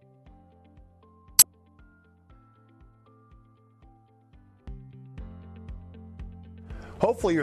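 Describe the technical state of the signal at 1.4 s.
At 1.4 s a corrupt frame was decoded: flipped bits in roughly two compressed frames were played anyway, so misread gains and codes put energy at wrong frequencies from 1.39 to 1.45 s. The result is a brief chirp, squeak, blip or burst of noise, with the error peaking near -5 dBFS.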